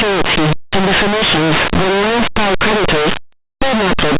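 From start to finish, the speech is buried under harsh, very loud distortion: linear audio read as companded. Plain 8-bit linear samples are being expanded as if they were mu-law codes. Values just to one side of zero blow up to the largest outputs while those on the other side stay small, so even quiet passages roar. The 8-bit coding itself would only add faint grainy hiss about 50 dB down, not this constant harshness.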